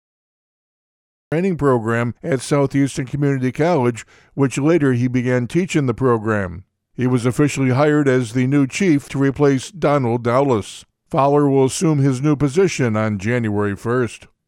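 For the first 1.32 s the audio is pure digital silence, and then sound arrives abruptly, already in progress, with no attack or fade-in. This is a cut-off start: capture or streaming began late, so the opening of the sound was never recorded and playback enters mid-sound at 1.32 s.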